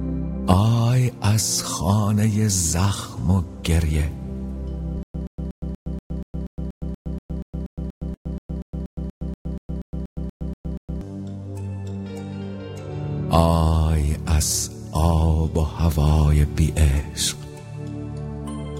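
From 5.03 to 11.01 s, a stutter with silent gaps: a 125 ms fragment repeats 25 times, each followed by 114 ms of digital silence, likely a stalled stream.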